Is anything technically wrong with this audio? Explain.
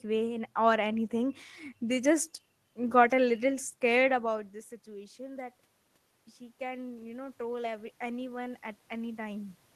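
Yes. From 6.37 to 9.62 s the speech and the room noise behind it swell upward together by about 6 dB over roughly three seconds. This is automatic gain rising: after the input fell by about 16 dB, the gain control slowly raised its gain, lifting everything at once. The earlier level shift around 4 s, where the talker moved relative to the microphone, changes only the voice, not the room noise.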